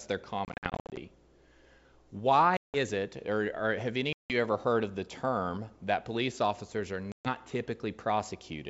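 Packet loss on an ADPCM call strikes four times: scattered dropouts from 0.45 to 0.99 s, about 310 ms missing, longest run 60 ms; 2.57 to 2.75 s; 4.13 to 4.34 s, between "or or have" and "ever heard of the"; and 7.12 to 7.29 s after "that police officers are". Lost packets become hard-edged silence, and the decoder's predictor and step size drift from the sender's, so speech resumes slightly distorted before settling, over the otherwise clear G.722 wideband band.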